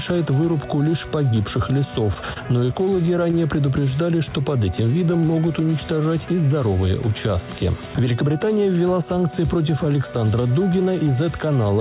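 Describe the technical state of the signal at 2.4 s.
Packets arrived late, draining the jitter buffer repeatedly: a repeated stall (stutter) from 2.14 to 3.35 s, nine brief gaps up to 26 ms bridged by held sound, so the audio drags and stutters.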